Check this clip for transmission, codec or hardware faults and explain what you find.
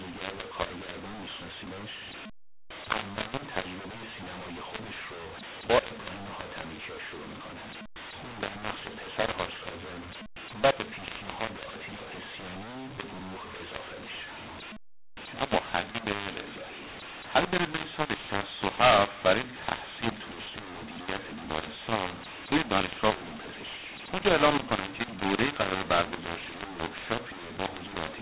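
There is one fault, and it runs through the whole clip: the speech was encoded as mu-law but decoded as A-law, a mu-law and A-law mixup in the G.711 telephone path. The band stops at 4 kHz, which fits ordinary 8 kHz telephone sampling. Both laws pack each sample into 8 bits on a logarithmic curve, but the curves and bit layouts differ. Reading mu-law bytes through the A-law table maps every level to the wrong one, so some samples come out too loud and others too quiet. The speech sounds harsh and gritty throughout, and the quietest samples are pushed well above silence, so the pauses between phrases fill with a hiss instead of dropping out.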